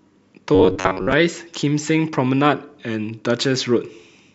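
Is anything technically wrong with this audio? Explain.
Yes. Robotic sound from repeated short buffers, 0.55 to 1.13 s: likely starved playback looping a roughly 10.7 ms chunk, skipping about half the audio and forcing a rigid, metallic 94 Hz buzz onto the speech.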